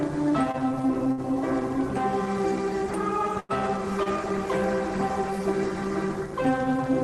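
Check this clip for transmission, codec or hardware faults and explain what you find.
Four short stalls from late packets are audible, at 0.51 to 0.56 s, 1.12 to 1.20 s, 3.40 to 3.51 s and 4.03 to 4.08 s. Each time a packet failed to arrive when due, the jitter buffer ran dry and the receiver stretched the last bit of sound, by about 23, 61, 94 and 25 ms, until the packet arrived. The sound briefly holds, with a faint buzz or dip, then resumes exactly where it left off. That resumption is what distinguishes these from packet loss: nothing is skipped or replaced, and the timing only slips later. The call codec's coding noise and the roll-off above about 12 kHz, consistent with Opus at a modest bitrate, are present throughout.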